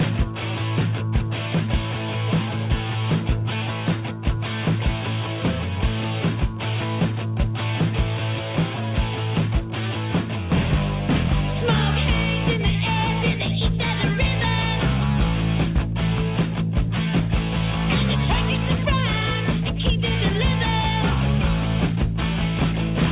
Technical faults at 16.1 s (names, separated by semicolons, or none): none